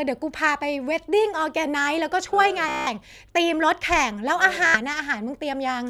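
At 2.69 to 2.88 s the speech breaks into a Bluetooth stutter, a rapid machine-gun buzz as the receiver replays its last short slice while packets fail to arrive. The speech resumes about 0.18 s further on, as though it had kept playing. A shorter burst at 4.67 to 4.78 s skips about 76 ms. On a spectrogram each burst shows vertical bands repeating at fixed spacing; the waveform shows one identical short cycle copied end to end.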